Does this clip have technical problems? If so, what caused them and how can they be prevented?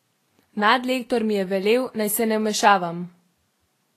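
Yes. Throughout the speech there is plainly audible Vorbis compression damage, likely from a low bitrate around 32 kbps: nothing above 14.2 kHz, and coarsely quantised treble that turns fine detail into grainy hiss and smears consonant attacks. Encoding at a higher Vorbis quality setting prevents this.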